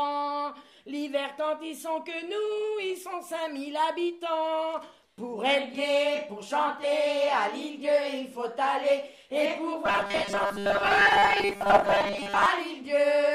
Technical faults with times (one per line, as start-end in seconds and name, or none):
9.86-12.46 robotic sound from repeated short buffers